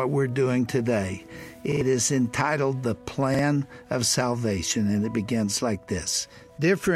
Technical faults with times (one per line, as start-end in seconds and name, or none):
1.72-1.81 repeated buffer
3.34-3.39 repeated buffer